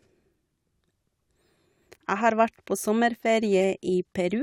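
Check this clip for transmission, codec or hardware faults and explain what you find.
Two corrupt frame decoded faults are audible. The first runs from 2.54 to 2.60 s and is faint, well below the speech. The second, from 3.61 to 3.64 s, is much louder and more obvious. Bit errors in the compressed stream made the decoder apply wrong gains and misread codes, so energy landed at the wrong frequencies for a few frames' worth of time. Each event sounds like a short chirp or squeaky blip. On a spectrogram it appears as a brief out-of-place smear, and on the waveform as a small spike.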